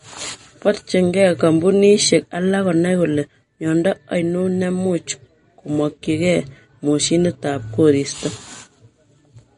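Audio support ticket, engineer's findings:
Watery, swirly speech across the whole clip, nothing above 10.6 kHz. Likely MP3 compression at a low bitrate, around 40 kbps: encoder cuts treble and drops weak spectral lines frame by frame. The flickering swirl, not just dullness, separates it from a plain low-pass.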